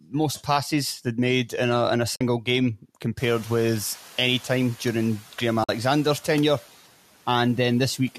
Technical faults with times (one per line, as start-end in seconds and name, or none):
0.01-0.14 speech cut by the noise suppressor
2.16-2.21 AAC frame loss with muting
5.63-5.69 AAC frame loss with muting